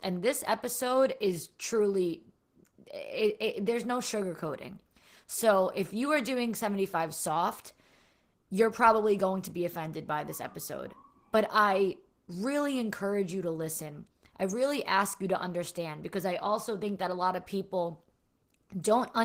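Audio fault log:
throughout, Opus voice compression: the speech is coded at a low bitrate, which fits about 16 kbps, and its excitation is quantised coarsely, leaving it plainly hoarse and slightly robotic.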